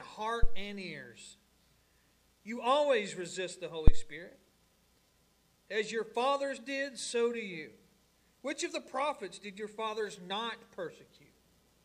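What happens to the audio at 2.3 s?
Nothing out of the ordinary happens at 2.3 s; the audio runs through that moment intact, with no dropout, click, distortion or other fault.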